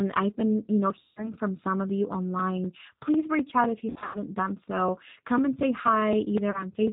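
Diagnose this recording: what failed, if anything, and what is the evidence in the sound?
At the codec stage, the speech runs through G.729 at 8 kbit/s throughout, removing everything above 4 kHz and leaving a plainly rough, synthetic texture.

On the network, packets were lost, and VoIP packet loss concealment in the speech codec stretched the last sound into a fading buzzy tone or coloured noise at 1.0–1.32 s, 3.9–4.19 s and 6.5–6.65 s.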